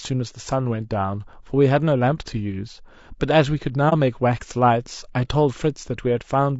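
A speech clip with grainy, rough coding damage running all the way through, most likely from low-delay AAC compression of the AAC-ELD kind used in video calls. The short frames it works with can't separate the pitch harmonics cleanly, so you get a noisy fill between them and a synthetic top end, and the level of damage fits a bitrate somewhere around 32 kbps. On top of that there's an AAC frame loss with muting from 3.89 to 3.93 s. The sound fades out and back in, leaving a brief dip. That's what you get when the decoder zeroes a missing frame's spectrum and the overlapping windows smooth the edges, and the length points to a single lost frame of roughly 30 ms.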